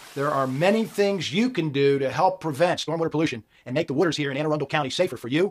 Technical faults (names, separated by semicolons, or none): time-stretched section